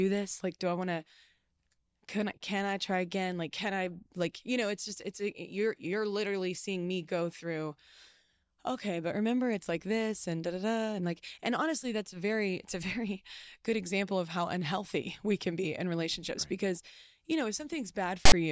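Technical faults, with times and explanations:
18.25–18.32 s, file tags played as audio: near the end of the clip, a block of text tags is decoded as if it were samples, so about 70 ms of loud, harsh rasp cuts in with hard edges at both ends. Byte values of text sit in a narrow range, so the waveform jumps to a dense block pushed to one side of zero, and the spectrogram shows a sharp-sided vertical band of broadband energy.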